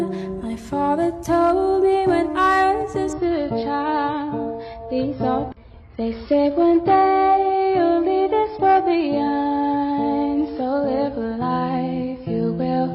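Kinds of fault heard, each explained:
Adaptive stream at a lower bitrate: from 3.13 s onward the top end suddenly stops at 5.5 kHz and the sound turns smeared, with no gap. The player switched to a leaner encoding, which fits a fall from 96 to 16 kbit/s AAC.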